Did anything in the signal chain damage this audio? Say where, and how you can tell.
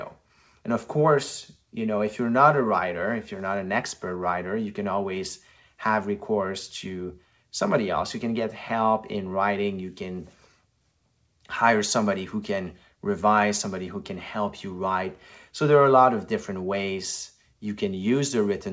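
No, nothing in the signal chain has damaged this speech. The audio has passed through a WebRTC call path that is working normally, and nothing can be heard above 8 kHz, which fits a wideband call codec such as G.722 at 64 kbps.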